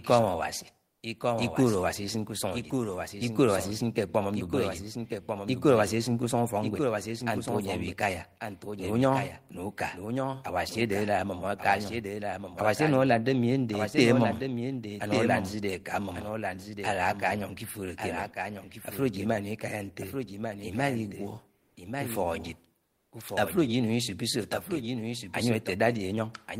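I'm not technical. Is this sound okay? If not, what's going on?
No. Two problems are audible.

The main one is a doubled audio track. The whole recording plays twice at once, with a second copy trailing about a second behind and a little quieter than the original. It sounds like a clean, dry echo with no room sound to it. This most likely happens when the audio is captured twice, once through a slower route, and the two copies end up mixed together.

The second problem is comfort noise in place of the background, in three brief pauses: 0.89 to 1.01 s, 21.57 to 21.75 s, and 22.85 to 23.11 s. Each lasts only a fraction of a second. In those gaps the real background hiss drops out and a flat, artificial hiss fills in. In the first gap it is slightly quieter, in the second slightly louder, and in the third about the same. This is likely a calling app that stops sending sound during silences and fills the gap with synthetic noise at the receiving end.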